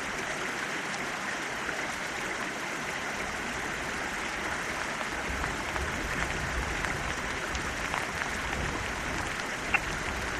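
A brief burst of misplaced energy, a chirp, squeak, blip or noise burst, cuts into the sound at 5.25 to 5.27 s, and a louder one at 9.74 to 9.80 s. Each is a corrupt frame decoded: flipped bits were played anyway, spreading energy across wrong frequencies for a couple of frames, then a few.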